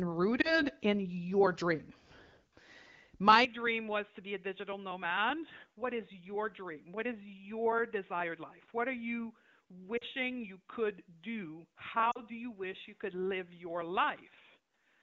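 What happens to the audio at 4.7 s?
From 3.45 s to the end, the sound turns dull and about 10 dB quieter, with nothing above 3.8 kHz and faint new background noise. This is likely an input switched to a poorer device. Unlike a bandwidth-only drop, the level and noise floor shift too, with no gap at the switch.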